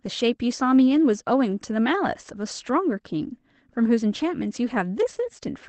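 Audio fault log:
0.91–0.97 s and 2.61–2.63 s, lost packet rebuilt from error correction: there's no dropout, just two short patches that turn rough and noisy. The first lasts about 40 ms, which fits two lost 20 ms packets back to back, and the second is a single 20 ms one. The decoder had no gap to fill because the next packet carried a low-bitrate backup copy, so it played that instead, and the thinner coding shows up as grit.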